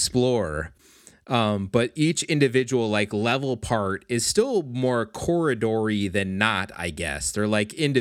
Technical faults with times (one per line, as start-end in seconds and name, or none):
none